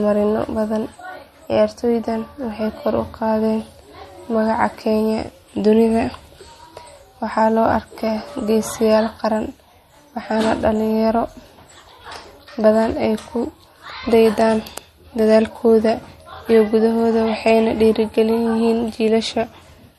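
All the way through, the speech has two layers of coding damage stacked on each other, and it's likely down to transcoding between lossy codecs. You hear the artefacts of both codecs together, which fits a fairly low-rate MP3 pass that was then re-encoded to Vorbis. The second encoder has spent its bits redrawing the first one's artefacts and added its own on top. Nothing sits above about 13.2 kHz, so the top end sounds dull and closed-in.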